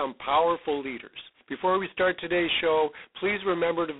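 From start to finish the speech carries G.726 ADPCM damage. Each sample is coded as a coarse difference from a prediction, leaving a harsh, rasping hiss that rises and falls with the speech level, which fits 16 kbit/s. The band runs from 300 Hz to 3.6 kHz with nothing above 3.8 kHz. That level-tracking grit sets it apart from the swirly, metallic warble of low-bitrate perceptual codecs.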